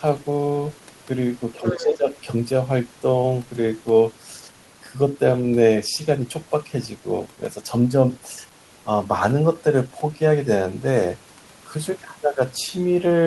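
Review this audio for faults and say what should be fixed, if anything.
Speech suppressed in double talk, 1.6 to 2.09 s: the talker drops by about 10 dB for half a second, likely an echo canceller attenuating everything while both sides speak. Better double-talk detection would prevent it.

Other side's voice leaking through, 1.63 to 1.97 s: a second voice sits about 10 dB under the talker, likely loudspeaker echo the canceller left behind. Stronger residual echo suppression would prevent it.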